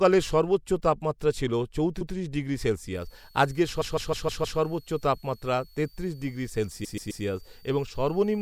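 At 2.00 s, right after "সর্বোচ্চ তাপমাত্রা ছিল", a 0.13 s block of repeated frames plays twice, a short stutter. On the waveform the same shape appears twice in a row.

From 3.01 s to the end, a switching supply whistle sits faint under the speech, roughly 35 dB down. A power supply's burst-mode oscillation, or its beating with another supply, is leaking in, heard as a thin high tone. On a spectrogram it is a narrow horizontal line wandering between 4.34 and 4.62 kHz.

At 3.80 s a 0.16 s block loops five extra times to 4.59 s, and at 6.83 s a 0.13 s block plays three extra times to 7.23 s. Both are machine-gun stutters that stretch the audio by 0.78 s and 0.39 s. Each shows as a train of identical copies.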